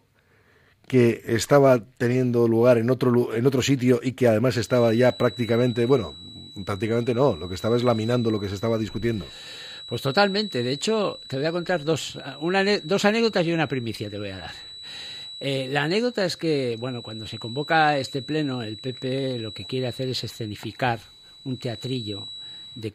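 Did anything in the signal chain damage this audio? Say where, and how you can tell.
Yes: a feedback whistle, a steady 3.9 kHz line on the spectrogram from 4.59 s to the end, well below the signal, likely from a loudspeaker-to-microphone loop sitting just short of runaway.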